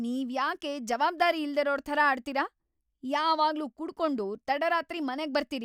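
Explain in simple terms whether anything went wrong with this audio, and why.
Nothing went wrong here.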